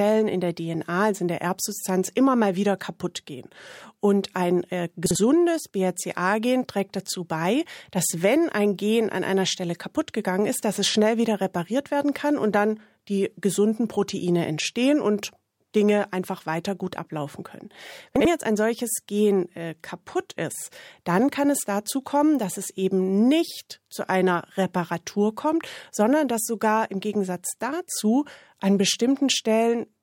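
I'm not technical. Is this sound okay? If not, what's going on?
No, there are two brief glitches from chunks out of order. Around 5.06 s, just after "ein äh", and again at 18.16 s, between "weiter gut ablaufen können" and "jetzt ein solches", a tiny slice of about 46 ms plays one step late. That makes the speech sound momentarily jumbled.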